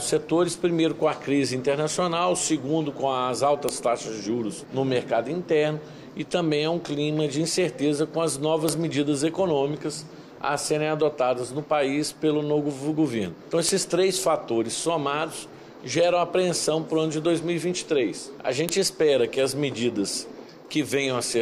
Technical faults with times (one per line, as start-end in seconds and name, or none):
3.69 file header played as audio
8.69 file header played as audio
13.69 file header played as audio
18.69 file header played as audio